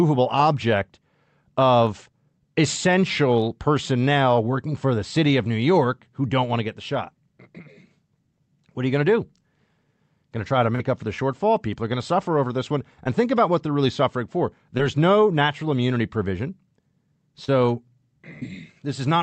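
Short concealed packet loss occurs four times: 10.75–10.80 s after "to try to", 13.04–13.06 s, 14.77–14.80 s before "no natural immunity provision", and 17.45–17.49 s. Missing 10–40 ms stretches were rebuilt from preceding sound, giving brief smears. Spectrograms show smoothed, repeated harmonics, and waveforms show copied cycles.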